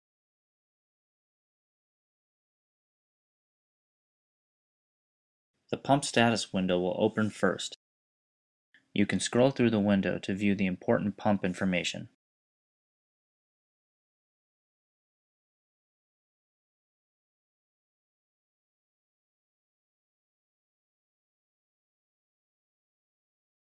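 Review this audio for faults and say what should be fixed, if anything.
Nothing stood out on listening, so there is nothing here that needs fixing.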